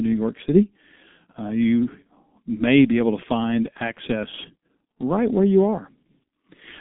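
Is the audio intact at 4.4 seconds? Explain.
No. At 4.4 s, as across the whole clip, G.723.1 codec damage is heavy: nothing above 3.7 kHz, and the coarse low-bitrate voice model leaves speech muffled, hoarse and smeared.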